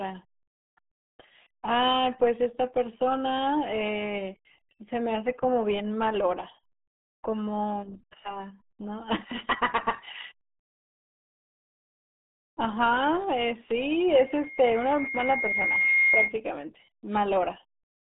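From start to end, the speech carries RealAudio 14.4 codec damage. Nothing passes above about 3.8 kHz, and the band sits near 150 Hz to 3.7 kHz. Heavy coding leaves it muffled and gargly. This points to an 8 kbit/s dial-up speech codec.

From 14.10 s to 16.36 s, a loudspeaker feedback squeal appears. The microphone hears its own loudspeaker, and the loop runs away at 2.1 kHz. A single tone swells over about two seconds. It ends up a few dB louder than the speech.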